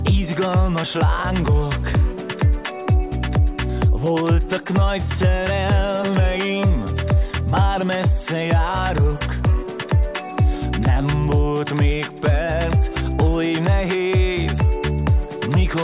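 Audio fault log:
Nothing stood out on listening.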